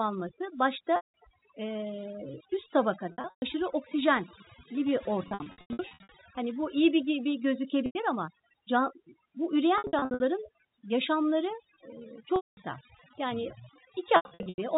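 A speech recording with overdone noise removal applied throughout: a noise reducer set far too aggressively pulls individual frequency bands down whenever they sit near its noise estimate, leaving a background that drops away into twinkling specks and a voice whose quieter parts vanish. Packet loss with pitch repetition breaks in at 0.96, 3.12 (just before "oksijenli bir"), 5.28 (just after "oksijenli bir", scattered over about 0.8 s), 7.86 (right after "bu iyi bir gibi"), 9.78, 12.36 and 14.16 s. At each point the receiver covers missing audio by repeating the last pitch period, so short gaps come out as a brief buzzy hold. Longer or clustered losses fade toward silence before the speech cross-fades back in. The audio stays within the telephone band below 4 kHz.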